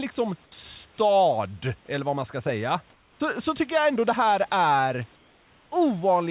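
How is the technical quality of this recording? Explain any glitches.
The recording has two brief glitches in the pauses, heard through a narrowband call path with nothing above 4 kHz.

Comfort noise in place of the background occurs at 2.92 to 3.2 s, after "vad man ska säga", and at 5.16 to 5.72 s, after "ändå det här är". The room noise turns flat and featureless, dropping by about 4 dB and about 2 dB. The likely cause is discontinuous transmission, with the receiver filling the pauses with synthetic noise.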